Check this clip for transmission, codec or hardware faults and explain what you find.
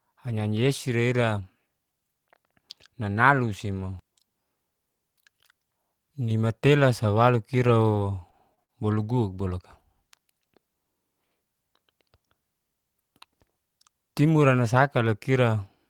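One transmission fault shows up in this speech. Repeated packet loss (robotic sound) runs from 7.67 to 8.70 s, right after "nimatela sa walo". Four short dropouts, the longest 56 ms, are each patched by stretching the preceding audio. That leaves the voice choppy, with about 100 ms missing.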